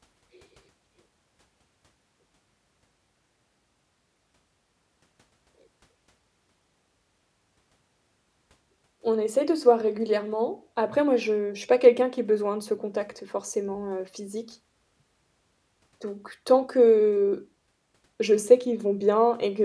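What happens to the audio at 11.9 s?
Nothing goes wrong at 11.9 s; the speech there plays through intact, with no dropout, click, distortion or other fault.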